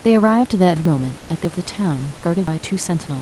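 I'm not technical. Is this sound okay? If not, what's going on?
No. There are two problems.

At 0.85, 1.45 and 2.48 seconds the speech jumps ahead. A piece is missing each time, about a third of a second at the first two and less at the last. This is a dropped buffer (overrun), likely because the program fell behind and lost that audio.

From 1.19 to 1.29 seconds, in a short pause, the real room sound disappears. A smooth, even hiss takes its place for a tenth of a second. This is comfort noise in place of the background. The call software likely stopped sending during the silence and filled the gap with made-up noise.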